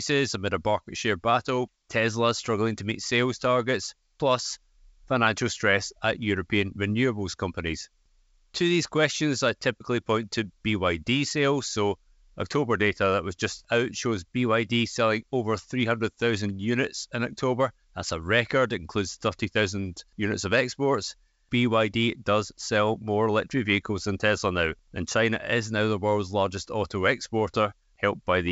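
Nothing here counts as a fault: the speech is carried over G.722 wideband telephone coding at 64 kbit/s, so the top end simply runs out around 7 kHz or a little above, which is just how that link is meant to sound.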